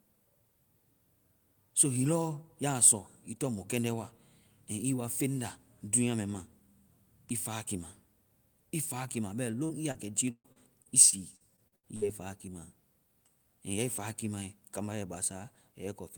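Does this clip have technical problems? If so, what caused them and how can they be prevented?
Yes. From 9.65 to 12.03 s there is repeated packet loss (robotic sound): twelve short dropouts, the longest 138 ms, arrive in quick succession. Each hole is bridged by stretching the preceding sound, so the speech turns choppy, with pieces missing, with about a fifth of that stretch being filler. A spectrogram would show frozen, smeared harmonic bands interrupted by abrupt vertical edges. Preventing it takes a steadier network path plus a larger jitter buffer and forward error correction.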